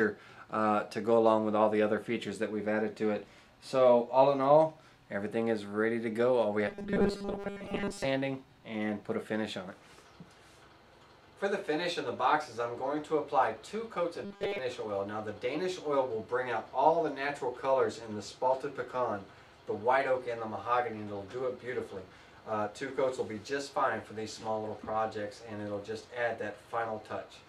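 Fresh audio was likely arriving too slowly, so the playback side kept refilling the gap by looping a tiny 5 ms slice while most of the real material was dropped. That produces robotic sound from repeated short buffers, heard twice: from 6.68 to 8.04 s and again from 14.25 to 14.58 s. Each time the sound collapses into a hard, metallic 200 Hz buzz that still loosely traces the underlying sound's shape.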